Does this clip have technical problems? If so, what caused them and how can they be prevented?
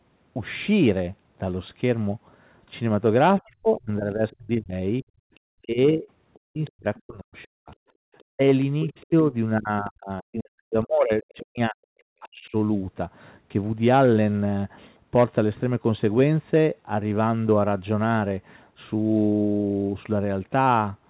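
Yes. From 3.4 to 12.55 s the speech is suppressed in double talk. For about 5 s in total the talker dips, by as much as about 40 dB at the deepest point. The likely cause is an echo canceller that cannot separate the local talker from loudspeaker echo while both sides speak, so it attenuates everything. Use a full-duplex canceller with better double-talk detection, or use a headset.

The other side's voice leaks through at 4.31–4.36 s, 5.35–5.40 s, 6.34–9.06 s and 11.29–11.34 s. It sits some 30 to 40 dB below the talker, as brief scraps and one longer stretch. Loudspeaker playback has likely reached the microphone and not been fully cancelled. A headset or a lower loudspeaker volume would prevent it.

The background is gated by the echo canceller at 5.04–5.33 s and 7.97–8.07 s. The room sound drops by about 40 dB and then returns. The canceller's suppressor clamped the microphone hard while the loudspeaker was active. 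Gentler suppression with comfort-noise fill, or removing the loudspeaker path, would avoid these gaps.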